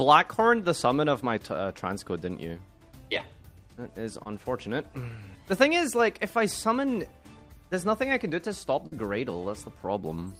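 At 4.23 to 4.27 s there is a short concealed packet loss. About 20 ms of audio arrived too late to decode, and the receiver covered it by extending the preceding sound before blending back. It registers as a quick smear or wobble.

At 8.87 to 8.94 s a burst of packet loss lasts longer. The receiver stretches the last sound into a held, fading buzz or hiss, then resumes with roughly 40 ms skipped. That audible fade and forward jump set it apart from the earlier brief smear.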